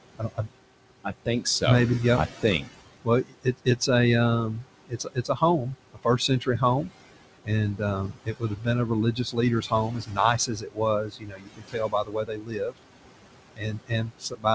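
Noise suppressor artifacts run the whole way through: the suppressor pulls the room noise down by about 21 dB, so it dips between words and swells back under them.

Speech cut by the noise suppressor shows up at 0.18–0.49 s, 1.04–1.63 s, 2.42–3.89 s, 4.53–6.90 s, 7.45–12.84 s and 13.56 s to the end. Quiet bits get mistaken for noise and sink by about 14 to 22 dB, sounding swallowed. The longest stretch loses around three seconds in total.

Underneath, the room noise sits about 13 dB below the speech, and the call path tops out at 8 kHz, which fits G.722.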